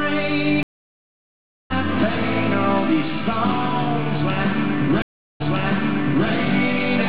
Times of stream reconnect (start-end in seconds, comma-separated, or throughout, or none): 0.63-1.72, 5.02-6.28